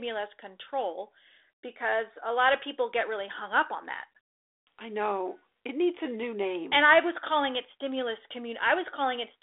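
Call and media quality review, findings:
No faults found; speech is carried over G.726 ADPCM at 32 kbit/s, band-limited to 300 Hz to 3.6 kHz, with only the light coding texture expected at that rate.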